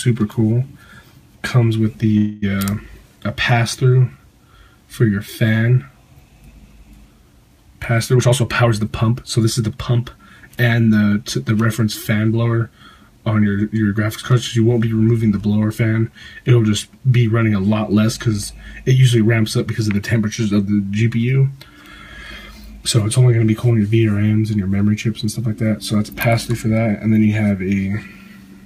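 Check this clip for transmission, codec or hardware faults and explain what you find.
Two transmission faults stand out: a brief call audio freeze early on and a later stretch of jitter buffer speed-up.

From 2.17 to 2.44 s the audio stalls. The last sound is stretched into a buzzy, fading tone for about a quarter of a second, and then the sound picks up exactly where it stopped, with nothing skipped. The likely cause is delayed packets draining the jitter buffer, so the receiver filled the wait with 247 ms of extended sound that pushed everything after it later. On a spectrogram this shows as smeared horizontal bands that decay before normal detail resumes. The waveform shows a repetitive, shrinking pattern.

From 8.16 to 10.43 s the audio runs about 11 % fast at unchanged pitch. That is jitter buffer speed-up. The buffer held more than its target, so the receiver trimmed many short pitch-period-length slices in succession, cutting roughly a third of a second in total. 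It sounds hurried. On the waveform, events in that stretch sit closer together. On a spectrogram, harmonic spacing stays the same while time features compress, with occasional tiny seams where slices were removed.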